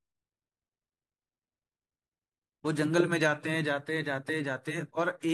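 No audible defects turn up anywhere in the recording, so there is nothing to log.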